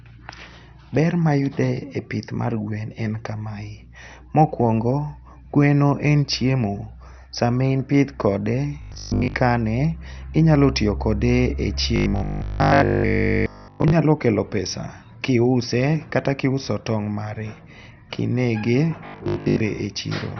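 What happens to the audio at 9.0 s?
At 9.0 s you're in the middle of a robotic burst from 8.82 to 9.34 s that sounds like repeated short buffers. A stalled feed likely caused the player to loop tiny chunks and skip most of the real audio, which forces a rigid 50 Hz metallic buzz. That fits a 20 ms buffer. Under that, the whole clip has the dull, gurgly MP2 compression sound, with nothing above 6.2 kHz. It's likely from coarse Layer II encoding at a low rate, something around 48 kbps.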